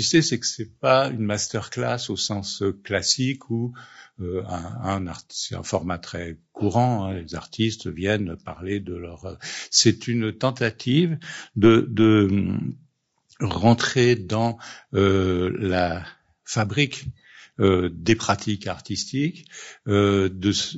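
From start to finish the speech sounds rough and grainy, as low-delay AAC compression at a low bitrate likely would, with damage that fits around 32 kbps. A spectrogram shows pitch harmonics smeared, noise filling the gaps between them, and a thinned, synthetic-looking top band.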